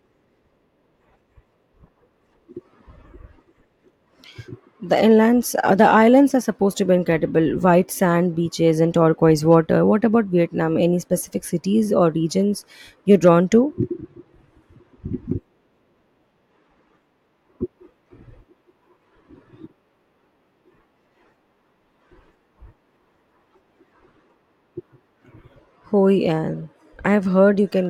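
No technical faults are audible anywhere in the recording.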